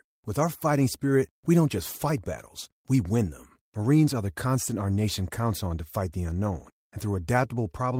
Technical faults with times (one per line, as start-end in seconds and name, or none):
none